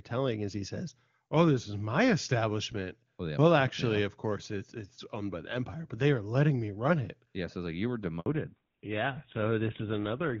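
Speech carried over an HD Voice call, clear up to 8.2 s in a way that fits AMR-WB at its top rate, breaks right after "it's like you were" with a handover gap. From 8.2 to 8.26 s the sound cuts to 60 ms of silence as the call switches networks, a clean dropout rather than the garbled smearing of packet loss. From 8.26 s to the end, a fallback to narrowband removes everything above 4 kHz and leaves the sound duller and rougher, consistent with GSM full rate. It is a lasting change of codec, not a brief filtering glitch.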